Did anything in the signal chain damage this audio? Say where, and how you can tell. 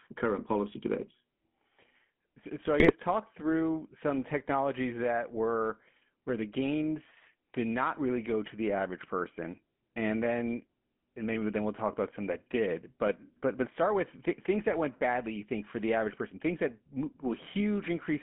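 Yes. The GSM full-rate codec damage runs through the whole clip, in the codec stage. The speech has a steady buzzy, gravelly roughness, and the band runs only from about 150 Hz to 3.4 kHz, which fits a 13 kbit/s full-rate stream. The codec models the vocal tract and excites it with a sparse, regularly spaced pulse train that keeps only every third excitation sample. That coarse excitation causes the grit, and it is plainly audible.

GSM bit errors occur at 2.80 to 2.93 s, between "so I" and "talk through some technologies", and at 13.05 to 13.11 s, between "about some that did" and "but but start with". These are network-stage faults. Each event is a short squawk or gargled pop. Corrupted bits from a weak radio link reached the decoder, and wrong filter, pitch or gain values bent the spectrum and level for a few frames. The lengths suggest about five frames were hit in the first event and three in the second.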